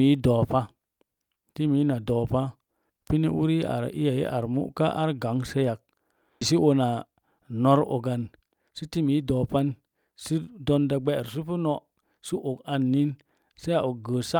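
At 6.41 to 6.43 s there is a skip ahead. About 0.7 s of speech never plays. Nothing fills the gap. The two sides are butted together almost directly, so the talk lurches forward and loses part of its flow.

Jitter buffer speed-up follows, from 7.07 to 7.40 s and again from 8.42 to 10.45 s. The buffer held more audio than it needed, so tiny pitch-period slices were cut, about 40 ms and then 200 ms in total. Speech runs about 9% fast at unchanged pitch and sounds hurried.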